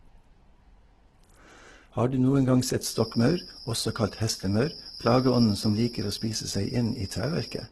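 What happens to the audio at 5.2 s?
A feedback whistle runs from 2.77 s, just after "du noen gang", to the end at 7.71 s: a steady 5 kHz tone about 15 dB below the speech, likely from a loudspeaker-to-microphone loop sitting just short of runaway. On a spectrogram it is a thin horizontal line at 5 kHz.

Opus compression is also present throughout, likely heavy 12 kbps CELT-mode coding, filling starved bands with folded or noise energy. The speech sounds grainy and rough, and the spectrogram shows a hard ceiling at 12.2 kHz with speckled upper bands.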